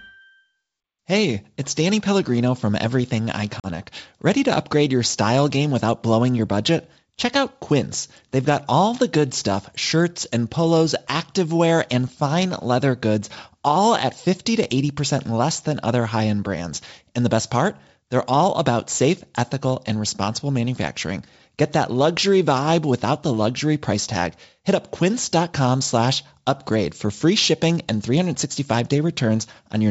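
At 3.60 s the speech drops into a hard-edged gap of about 40 ms, a couple of packets' worth, and recovers by 3.66 s. This is packet loss on an ADPCM call: the missing audio is filled with silence, and the receiving decoder's predictor and step size no longer match the sender's. Speech comes back slightly distorted. On a waveform it shows as a flat, square-cut hole; on a spectrogram, a vertical blank band across the 7 kHz G.722 range.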